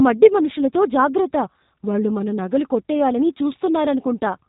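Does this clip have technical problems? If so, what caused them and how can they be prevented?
Yes. Throughout the speech there is G.729 codec damage, plainly audible. Nothing passes above about 3.8 kHz, and the voice has a rough, slightly synthetic buzz, which fits an 8 kbit/s G.729A stream. The codec rebuilds each 10 ms frame from a vocal tract filter, a pitch predictor and a few pulses rather than the waveform itself. Simple band-limiting would sound dull but natural; here the texture itself is coarse. Record or transmit with a wideband codec, or at a higher bitrate, wherever the link allows.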